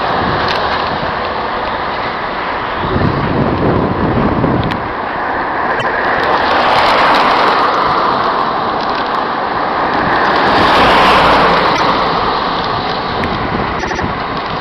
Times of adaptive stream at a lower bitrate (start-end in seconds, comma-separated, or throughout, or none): none